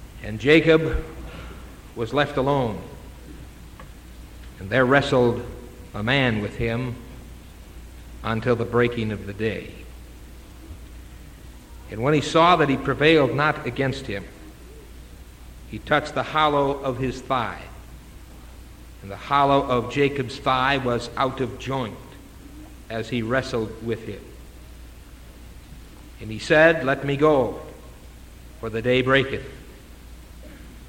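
No technical faults are audible.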